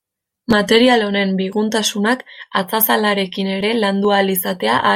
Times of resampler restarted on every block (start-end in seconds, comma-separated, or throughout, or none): 2.68-4.95